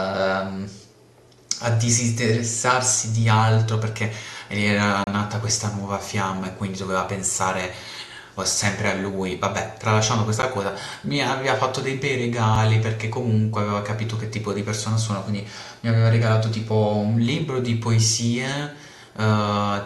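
Blocks of digital silence occur at 5.04 to 5.07 s (30 ms), 10.42 s (10 ms) and 12.55 s (about 6 ms). Each time the speech drops abruptly to silence and returns without any fade, so the longest gap is a brief hole while the shorter two are sharp ticks.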